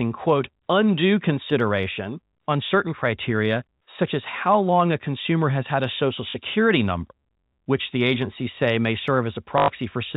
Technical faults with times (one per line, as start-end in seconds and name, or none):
6.30-6.34 packet loss with last packet repeated
9.58-9.68 packet loss with last packet repeated